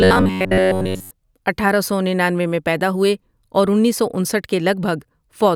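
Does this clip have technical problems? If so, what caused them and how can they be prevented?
Yes. From 0.01 to 1.1 s the speech hardens into a rigid, metallic buzz pinned near 94 Hz. This is robotic sound from repeated short buffers. The likely cause is audio arriving too seldom, so a roughly 11 ms slice is replayed over and over in place of most of the real signal. A larger buffer or steadier audio delivery keeps playback from running dry and prevents it.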